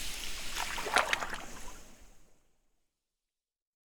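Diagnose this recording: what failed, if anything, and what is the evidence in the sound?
Nothing stood out on listening, apart from a smooth fade-out that begins at roughly 1.5 s and runs to the end, as an editor would apply it.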